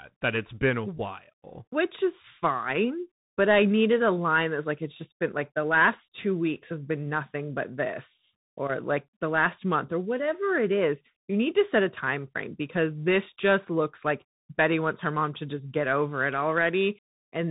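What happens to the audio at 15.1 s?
Dull, band-limited speech with nothing above 3.8 kHz, scratchy s sounds and a granular hiss, from the Bluetooth CVSD headset codec, which runs through the whole clip, not just at 15.1 s. Its one-bit up-or-down steps can't keep pace with sharp changes.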